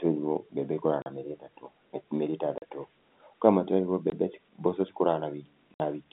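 Speech carried over G.711 telephone coding, band-limited to roughly 200 Hz to 3.6 kHz, shows packet loss filled with silence: hard-edged gaps at 1.02–1.06 s after "mbembe ĩkũraga", 2.58–2.62 s, 4.10–4.12 s and 5.74–5.80 s. Their lengths of 40, 40, 20 and 60 ms point to dropped 20 ms packets.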